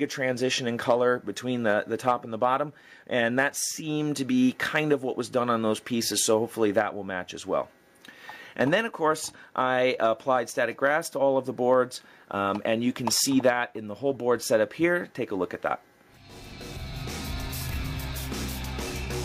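No technical faults can be heard anywhere in the clip. Nothing in the sound points to a problem in how it was captured, processed or delivered.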